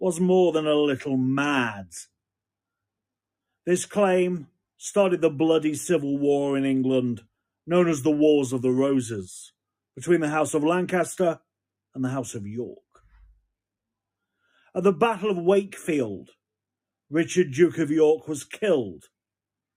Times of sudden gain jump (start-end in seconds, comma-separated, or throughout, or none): none